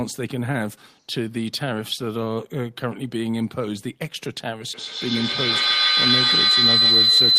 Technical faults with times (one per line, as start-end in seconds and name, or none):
4.74-7.38 feedback howl